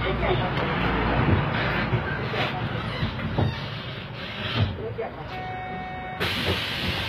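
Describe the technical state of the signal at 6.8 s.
HE-AAC compression is present at 6.8 s and runs through the whole clip. Above 14.9 kHz there is nothing, and the treble below that sounds synthetic, likely because only the lower spectrum was coded and the top was rebuilt by copying lower bands upward under a coarse envelope. The damage is plainly audible: high-frequency detail turns gritty and metallic, with harmonics misaligned across the crossover, which fits a bitrate of around 20 kbps.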